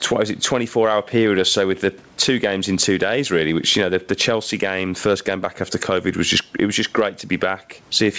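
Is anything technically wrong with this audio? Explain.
Yes. The speech shows gain pumping from start to finish. The likely cause is input gain set far too high for the microphone, with a fast limiter or compressor clamping it back down whenever the speech gets loud. The gain therefore swings by something like 15 dB. Loud and quiet passages sit unnaturally close in level, giving a breathing, squashed sound over the room noise, which otherwise lies about 41 dB below the speech. The top end stops at 8 kHz, which fits a wideband call codec such as G.722.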